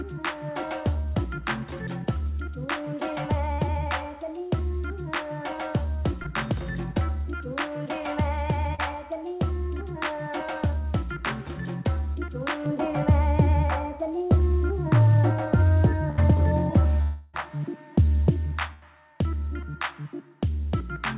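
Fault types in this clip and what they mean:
short concealed packet loss: Tiny gaps of a few hundredths of a second, filled by extending the preceding sound, near 3.54, 6.23 and 8.75 s (about 41, 15 and 36 ms). They are heard as brief smears or wobbles.
de-emphasis applied wrongly: From 12.66 to 18.31 s the treble slopes down smoothly, about 11 dB lower at 10 kHz than at 1 kHz, so the sound turns dull and muffled. It is a gradual tilt, not the hard edge at 4 kHz left by the G.711 call path.
burst of packet loss: Two longer holes, at 16.10 s (about 75 ms filled) and 18.73 s (about 84 ms). In each, the last sound is held as a buzz or hiss that sags in level before the audio picks up further along. The longer span and the fade set these apart from the short concealments.
long network dropout: At 17.02 to 17.35 s roughly a third of a second is filled by a continuation that fades but never reaches silence before the audio resumes further on. 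A stretch this long is likely a dropout rather than a burst, though the concealment itself sounds similar.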